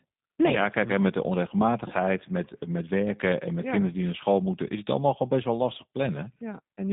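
Speech squeezed through a G.729 codec the whole way: band-limited to roughly 150 Hz–3.7 kHz, with that rough, buzzy synthetic edge typical of 8 kbit/s VoIP.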